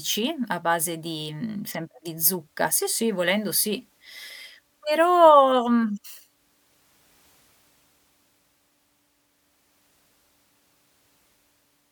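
Nothing technically wrong turns up in this speech clip; it comes across as a straightforward recording with no faults to point to.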